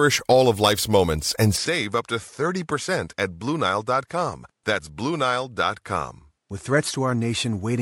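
At 1.56 s the speech turns duller and a few decibels quieter through to the end, with no gap at the join; the input was likely switched to a poorer device. A spectrogram shows content stopping at 11.4 kHz, and the waveform shrinks slightly.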